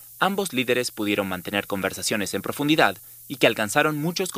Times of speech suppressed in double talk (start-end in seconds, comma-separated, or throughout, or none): none